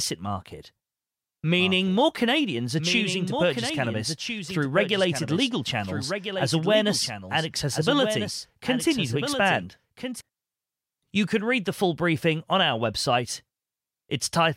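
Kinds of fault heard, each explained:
Doubled audio track: from 1.59 s to 10.21 s a second full-band copy of the speech runs about one and a half seconds behind the original, a few decibels quieter. It carries no decay or added room colour, so it reads as a separate overlapping track rather than an echo, and it cuts in and out abruptly at both ends. The likely cause is the signal being captured again through a slower path, or an edit leaving two misaligned copies.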